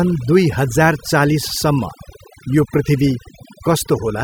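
Overdone noise removal runs through the whole speech recording. A noise reduction stage was pushed too hard. Wherever a frequency band sits close to its estimate of the noise floor, it pulls that band far down or cuts it out. Quieter parts of the speech are caught and removed along with the noise. Between phrases, the background drops and breaks up into small twinkling specks.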